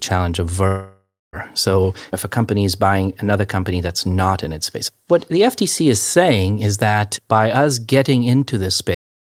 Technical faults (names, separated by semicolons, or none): long network dropout; cut-off end